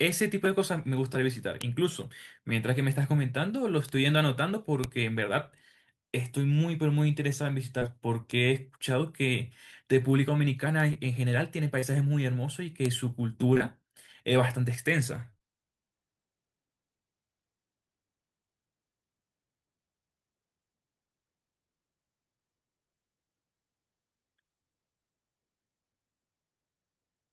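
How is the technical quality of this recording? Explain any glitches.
The speech carries two recurring faults: isolated digital ticks and brief patched-over dropouts.

Bit error spikes at 1.62, 3.89, 4.84, 8.31 and 12.86 s: a flipped bit in one to three samples makes each a sharp broadband tick.

Short concealed packet loss at 7.79, 10.93, 11.79–11.96, 13.54–13.62 and 15.30–15.42 s: missing 20 to 40 ms chunks are filled by extending the preceding sound, heard as smeary wobbles.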